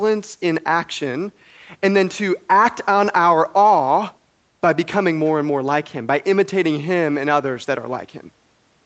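No faults are audible in the speech: the band stops at 8 kHz, as expected from the call microphone processing and the Opus call path at 24 kbps, and the room noise sits about 45 dB below the voice.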